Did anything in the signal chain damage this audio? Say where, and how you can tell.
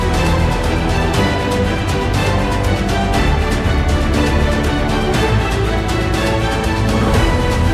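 No, nothing in the signal chain damaged this audio.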